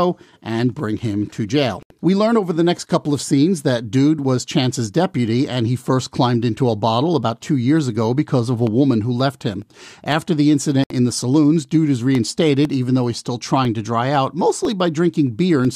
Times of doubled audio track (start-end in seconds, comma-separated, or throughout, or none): none